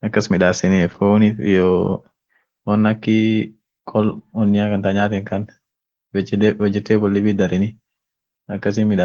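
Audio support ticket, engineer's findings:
Opus voice compression throughout, SILK plus CELT hybrid starved of bits, fitting about 16 kbps: coarse excitation coding leaves speech audibly hoarse, muffled and slightly robotic, with thin upper band.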